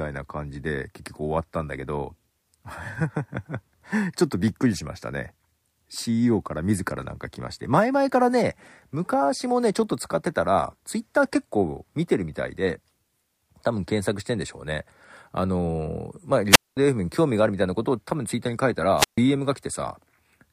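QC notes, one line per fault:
16.50–16.77 s and 18.96–19.18 s, wireless microphone squelch dropout: the speech gives way to a short burst of hiss or static, then drops into a hole of near silence, about 215 ms the first time and about 137 ms the second, before the speech comes back. That's the FM radio link fading out, so the receiver's squelch kicks in and mutes the output until the signal recovers.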